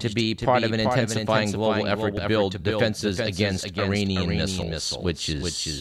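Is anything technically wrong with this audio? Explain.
Yes, there are two faults in this speech clip.

A doubled audio track runs throughout. A second full-band copy trails the original by around 400 ms at about 5 dB quieter, which most likely comes from the sound being captured again through a slower path. Every syllable is followed by a flat, dry echo with no room tail. On a spectrogram each speech pattern repeats as a fainter, identical shape shifted right by a constant offset.

Audio missing between chunks occurs at 2.17 s, between "an intensifying global effort" and "build defenses against", and again at 4.62 s. The 2.5 s spacing fits a chunked recorder or processor that likely drops about 50 ms each time it moves to the next block. The two sides are joined with no gap, so each sounds like a small skip. A waveform shows an abrupt discontinuity at each point, and a spectrogram shows a thin vertical seam where harmonics jump.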